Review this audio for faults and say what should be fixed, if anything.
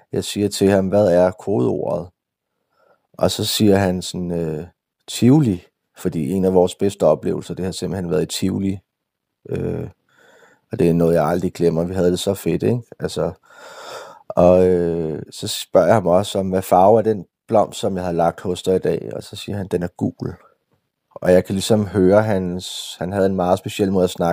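Nothing stood out on listening to the speech, so there is nothing here that needs fixing.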